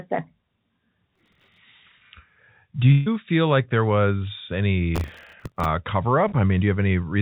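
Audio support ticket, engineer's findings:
Gritty crackle at 1.16–1.58 s and 4.95–5.65 s: processor overload crackle. CPU is missing dozens of tiny buffer deadlines in a row, a couple of ms each, replaying stale audio with hard edges.

Burst of packet loss at 2.92–3.08 s: about 140 ms dropped in transit. The receiver continues the last sound and fades it down, then jumps ahead with that chunk gone.

Short concealed packet loss at 6.28–6.34 s: roughly 40 ms never arrived. The jitter buffer papers over it with a brief smear before blending back. The G.711 leg caps everything at 4 kHz.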